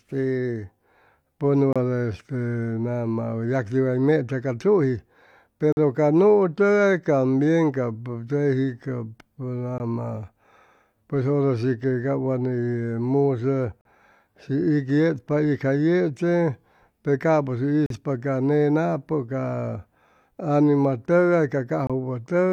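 Speech with a gap between stream segments: segment timestamps leave holes the player fills with silence, producing hard-edged dropouts of roughly 20 to 45 ms at 1.73, 5.72 (just before "ca nuu"), 9.78, 13.81, 17.86 and 21.87 s, spaced about 4 s apart, which fits 4-second segments.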